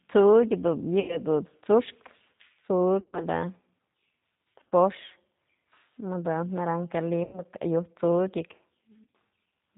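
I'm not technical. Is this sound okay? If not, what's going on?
No. The call went through the G.729 codec, a low-data phone codec that rebuilds the voice from a rough model and drops everything above 4 kHz. The voice sounds muffled, slightly rough and synthetic throughout.

There is also VoIP packet loss concealed by the speech codec. Chunks of audio never arrived, so the decoder guessed by stretching the last sound and fading it. Near 1.0–1.2, 3.0–3.26, 4.59–4.72, 7.24–7.43 and 9.04–9.11 seconds the voice turns buzzy or hazy and weak.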